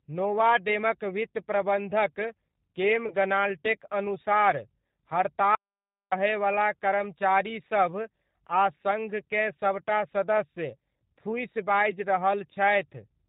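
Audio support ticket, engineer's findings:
Whole clip: speech narrow-band, rough, slightly synthetic, nothing above 4 kHz. G.729 codec damage, plainly audible, consistent with 8 kbit/s G.729A. Speech rebuilt from a vocal tract filter, pitch predictor and sparse pulses per 10 ms frame.

3.08–3.15 s, after "नोवामेडक वित्त प्रबन्धक केम": brief stretched, fading sound, voice weak or distorted after, into "ग्नाल्टेक अनुसार". VoIP packet loss concealed by the speech codec, fitting one lost 20 ms packet. Decoder extrapolated last pitch/filter at falling gain; recovery lags.

5.55–6.12 s: abrupt cut to silence, no room tone, about 0.57 s of sound gone. Audio dropout to silence, likely an input or link loss while the encoder kept writing silence.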